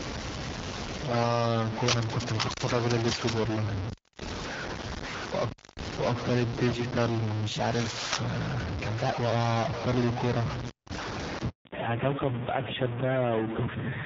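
A stuck bit runs through the whole recording: grainy noise or buzzy distortion rides on the speech, and the pauses fill with hiss. The likely cause is one data bit held at a fixed value. A handover gap from 11.49 to 11.65 s cuts the speech to silence for 160 ms while the call switches networks and no speech frames arrive. A fallback to narrowband follows at 11.65 s. The light AMR-WB coding at 12.65 kbit/s gives way to AMR-NB at 5.9 kbit/s, removing everything above 4 kHz and leaving the sound duller and rougher to the end.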